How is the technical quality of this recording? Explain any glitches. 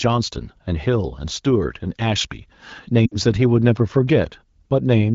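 One glitch stands out, heard over AMR wideband (HD Voice) coding at 15.85 kbit/s, which sounds clear with only light codec wear. Lost AMR speech frames, 3.06 to 3.15 s: about 60 ms of speech, consistent with three frames, failed decoding, so the decoder reused earlier settings with falling gain. The sound drops quickly to near silence, and returns weak for a moment.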